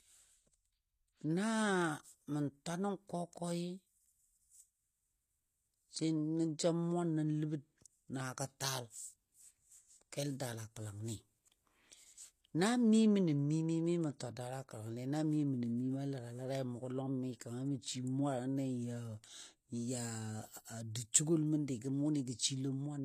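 Throughout the speech, s sounds come out gritty and lispy, and the treble above the midrange sounds bright but synthetic, stopping at 14.9 kHz. That points to likely HE-AAC compression at a low bitrate around 24 kbps, rebuilding the top band by copying lower bands upward. Unlike a plain low-pass, the treble isn't dull. It is present but doesn't match the lower harmonics.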